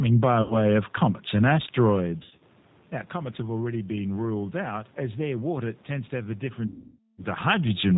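The whole clip passes through the G.729 codec at 8 kbit/s. Nothing above 4 kHz survives. The speech sounds plainly rough and synthetic.

VoIP packet loss concealed by the speech codec occurs three times. At 0.42 to 0.57 s, just before "of comets and", about 80 ms drops out. The decoder stretches the last sound, which then fades. At 2.23 to 2.43 s, short gaps are scattered across about 180 ms, the longest 50 ms. At 6.68 to 7.24 s, after "tends to have a", half a second is lost. The decoder extends the sound, which fades away.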